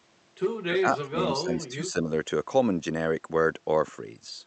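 A speech clip where, from 0.62 to 2.1 s, the talker's level keeps dipping by up to around 20 dB, about a second of it in all, with chunks going thin or vanishing. That's speech suppressed in double talk, likely an echo canceller ducking the near talker while the far end spoke over it. It all comes over an Opus call path with its usual coding noise and top end around 8 kHz.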